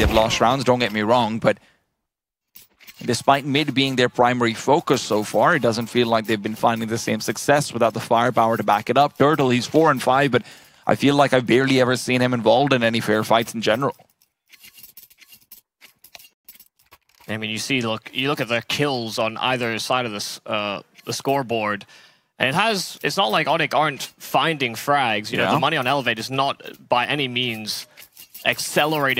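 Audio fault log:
Nothing stood out on listening to the whole clip.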